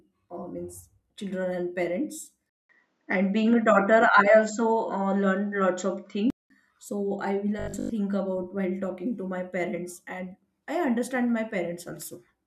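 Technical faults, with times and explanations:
2.49–6.50 s, input switched to a poorer device: the sound turns duller, with a narrower band, a level change of roughly 5 dB, and a new noise floor about 50 dB below the signal. A 200 ms silence marks the switch, likely a change to a narrower-band microphone. On a spectrogram the upper energy ends at a flat ceiling after a blank gap. The waveform shows a step in level and a different background noise.
7.60–7.92 s, robotic sound from repeated short buffers: the sound becomes a rigid, metallic 50 Hz buzz that still roughly tracks the speech. The playback is most likely filling gaps by looping the last chunk of audio. A 50 Hz pitch fits a 20 ms buffer repeated over most of this span while the real audio is skipped. On a spectrogram this appears as vertical striations every 20 ms and a harmonic comb spaced at 50 Hz. The waveform shows near-identical cycles.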